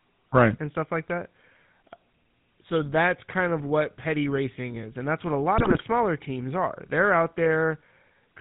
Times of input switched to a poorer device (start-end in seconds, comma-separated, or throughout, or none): none